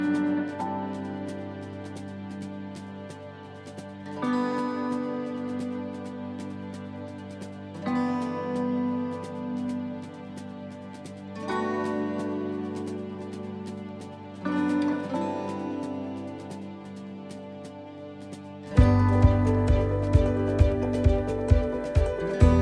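There are no technical faults to describe in this audio.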